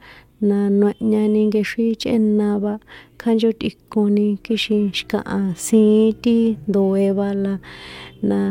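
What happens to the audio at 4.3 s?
Nothing goes wrong at 4.3 s: the speech carries straight through that moment with no dropout, click, distortion or other break.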